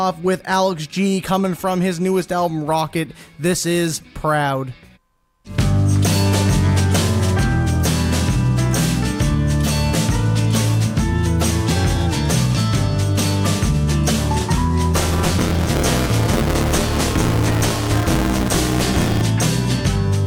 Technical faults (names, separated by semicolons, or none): buffer tearing